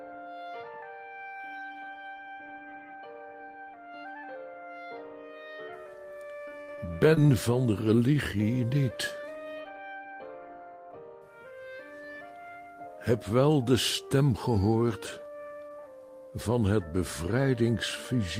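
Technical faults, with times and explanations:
6.45 to 6.79 s, repeated packet loss (robotic sound): a run of closely spaced holes, the longest about 68 ms, each patched by extending the preceding sound, so over a third of this stretch is synthetic fill. The back-to-back patches give a choppy texture.
7.14 to 7.18 s and 7.26 to 7.30 s, short concealed packet loss: two isolated dropouts of about 20 ms, each bridged by continuing the last sound and blending back. Each comes across as a brief smear or wobble with no robotic choppiness.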